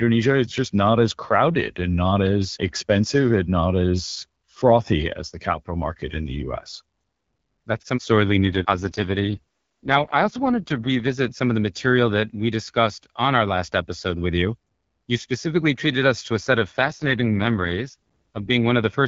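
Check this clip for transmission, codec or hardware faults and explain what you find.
Two AMR rate drops here, in speech carried over the AMR wideband (HD Voice) codec, which sounds clear at its usual rate.

From 8.44 to 11.30 s (after "some sorely", ending before "some of the material") and again from 16.80 to 18.51 s (after "to a set of"), the voice goes rough and synthetic. That points to the link weakening and the network pushing the codec from 12.65 down to 6.6 kbit/s to spend bits on error protection. The bandwidth holds and nothing cuts out.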